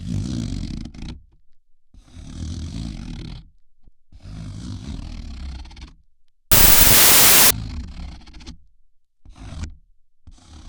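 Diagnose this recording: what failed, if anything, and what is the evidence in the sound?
A wrong sample width fault at the sample-format conversion stage from 6.52 to 7.51 s: loud noise swamps the audio, which plays about 1.33 times too fast and high. That ratio fits packed 24-bit data read as 32-bit words, so bytes from neighbouring samples get mixed.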